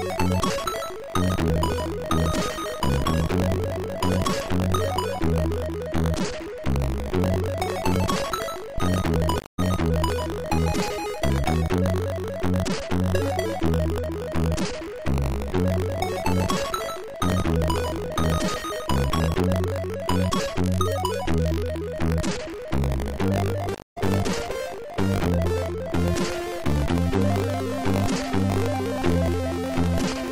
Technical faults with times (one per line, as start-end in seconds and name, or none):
0.00-30.31 buffer tearing
0.20-30.11 clock slip clicks
9.39-10.14 stream reconnect
23.75-23.98 stream reconnect